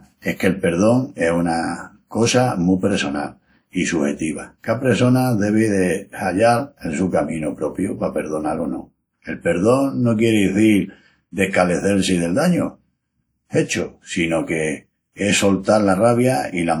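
Across the whole speech, plainly audible ringing and washy smearing, with content still reaching 20.1 kHz, is likely WMA compression at a rate fitting 48 kbps, spreading quantisation noise over long blocks.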